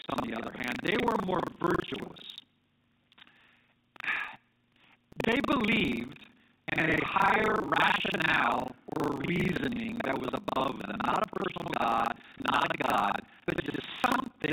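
A steady robotic rattle at 25 Hz runs under the speech from start to finish. This is buffer tearing: the writer and reader of the ring buffer cross every period, so about half of each buffer replays audio from roughly 70 ms earlier. At 6.86 to 6.88 s, between "believed and" and "higher rationale or reasoning", a small blip marks packet loss with last packet repeated. One 20 ms packet went missing and the previous one played again. The same small blip returns at 12.50 to 12.52 s, where another single lost 20 ms packet was filled by a repeat. All of this sits inside the narrow telephone band of the G.711 coding.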